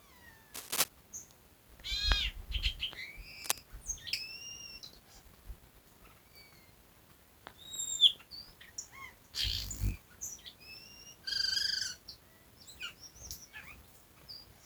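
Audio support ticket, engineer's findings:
Cable scratch noise, 0.54–0.88 s and 3.42–3.60 s. Dense, irregular crackle bursts over the audio, first roughly 5 dB above signal, second about level with it. Likely a worn cable or connector being moved, contact resistance fluctuating rapidly.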